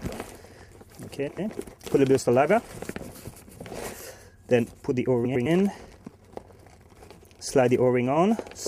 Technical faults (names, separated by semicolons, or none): frames out of order